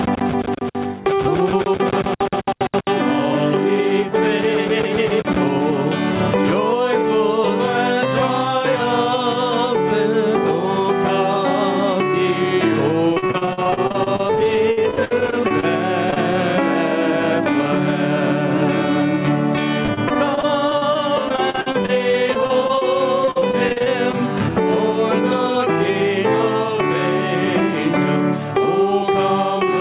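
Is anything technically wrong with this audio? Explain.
Yes, there are three kinds of fault.

Gain pumping runs through the whole clip. The level swings by around 15 dB: the background rises in quieter gaps and drops under each loud sound. The likely cause is input gain set far too high, with a fast limiter or compressor pulling it back on every peak. Loud and soft passages end up close together in level, which gives a squashed, breathing quality.

Repeated packet loss (robotic sound) occurs from 13.14 to 15.65 s, from 19.83 to 22.83 s, and from 23.25 to 24.15 s. Audio arrived late or not at all again and again, and the receiver patched each hole by extending the last sound before the next hole came. About 28%, 17% and 22% of those stretches is concealment, with single gaps up to 58, 49 and 44 ms. The result is choppy sound with fragments missing.

Short concealed packet loss happens twice back to back, from 16.11 to 16.14 s and from 16.14 to 16.18 s, each hole about 20 ms long. 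In each case the decoder lacked the data in time, synthesised a continuation of the preceding sound, and then blended back into the real signal. It comes across as a brief smear or wobble. The audio band stops at 4 kHz, as expected from the G.711 A-law call codec.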